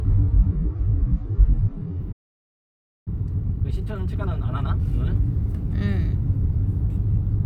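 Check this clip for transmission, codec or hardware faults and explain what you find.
Three faults are audible, all in the first five seconds.

From 0 to 2.0 s the sound is dull and muffled, with heavier codec artefacts, then it brightens abruptly with no gap. This is an adaptive stream starting at a low bitrate. The player began on a thin version so it could start quickly, then switched up once it had gauged the connection. The change in quality fits a jump from about 16 kbit/s AAC-LC to about 96 kbit/s.

At 2.12 s the sound cuts out mid-flow and stays silent for about 0.94 s, resuming at 3.08 s. This is a playback stall. The likely cause is that the player's buffer ran dry or its thread was blocked, leaving the output with nothing to play until it recovered.

From 3.08 to 4.94 s the sound runs hurried, at 1.5 times normal speed, yet its pitch is unchanged. This is time-compressed catch-up. 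To work off the backlog left by the stall, the player drops small slices and cross-fades across the joins.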